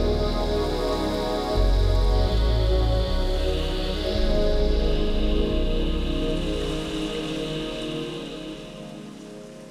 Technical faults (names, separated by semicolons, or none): none